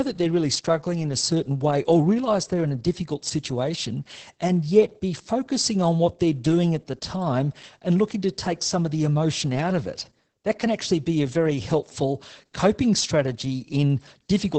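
Speech throughout has Opus voice compression: muffled, hoarse, slightly robotic, fitting the SILK coder near 10 kbps. A spectrogram shows nothing above 8.7 kHz.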